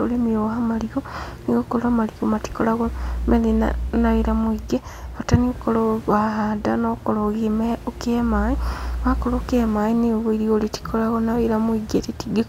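No technical faults can be heard in this speech recording. A steady background of room noise sits about 22 dB below the speech, a property of the recording space rather than of the system.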